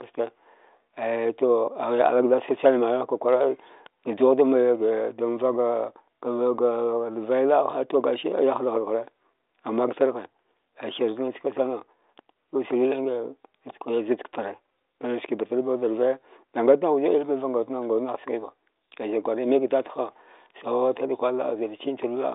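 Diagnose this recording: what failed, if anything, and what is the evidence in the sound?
Nothing stood out on listening: the speech arrives over a 40 kbit/s G.726 telephone path, limited to roughly 300 Hz to 3.7 kHz with nothing above 3.8 kHz, and any coding hiss it carries is faint at most.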